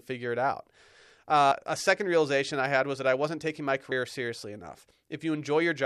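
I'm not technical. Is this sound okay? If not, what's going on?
No. There is audio missing between chunks, heard as two skips in the speech. The first is at 1.51 s, just before "a second realization I", and the second is at 3.91 s, right after "I wasn't taking my". At each one, about a tenth of a second of sound drops out and the two sides are butted together with no gap. The skips fall 2.4 s apart. That likely means the recorder was saving the sound in pieces a few seconds long and lost a sliver each time it moved to the next piece.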